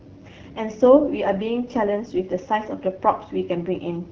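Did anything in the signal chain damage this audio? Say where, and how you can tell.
Yes, the codec stage did it: an AMR wideband (HD Voice) codec throughout, rough and raspy speech, and nothing above 6.9 kHz, which fits a low rate around 8.85 kbit/s.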